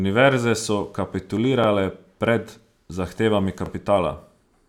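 At 1.64 to 1.66 s, right before "pred zahtevami", you get the first join where overlapping chunks bite: each new chunk starts before the last one finished, so about 25 ms of speech plays twice, and it comes through as a quick click-stutter. It happens again at 3.66 to 3.69 s, just after "pred zahtevami", about 2 s later, which fits a chunk length of 2 s with that little overlap.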